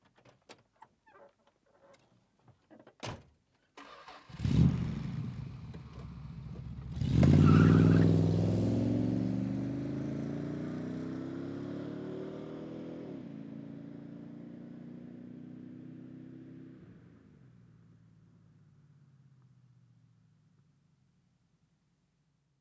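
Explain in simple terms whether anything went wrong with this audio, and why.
Nothing went wrong here; the sounds just carry the normal mark of a call's microphone processing, which trims the deepest bass and keeps nothing above 8 kHz, and that's expected rather than a problem.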